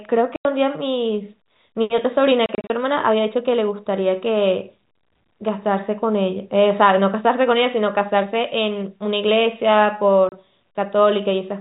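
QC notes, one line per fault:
0.36–0.45 s, 2.46–2.70 s, 10.29–10.32 s: packet loss filled with silence. There are hard-edged dropouts of 90 ms, then 120 ms scattered across 240 ms in gaps of at most 30 ms, then 30 ms. All are multiples of 30 ms, which fits lost 30 ms packets replaced by silence.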